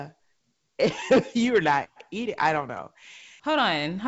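From 0.90 to 1.02 s, bit errors on an ADPCM link, at roughly 0.3 percent, corrupt the G.722 stream. Each flipped bit derails the decoder's step size and predictor, producing pops and a rough burst with level jumps: spiky waveform excursions and broadband vertical streaks on a spectrogram.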